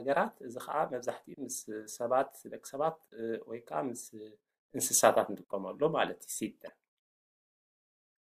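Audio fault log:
6.67–6.70 s: damaged data in a compressed stream. A brief glitch cuts through. The decoder misread corrupted frames, lost sync and skipped ahead to the next frame header.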